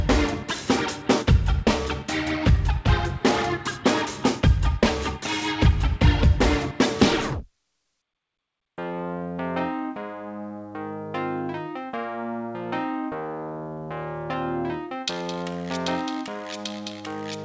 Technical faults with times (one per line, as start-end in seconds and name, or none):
none